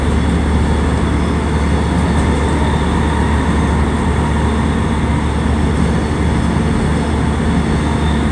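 Nothing is technically wrong with this recording of sounds.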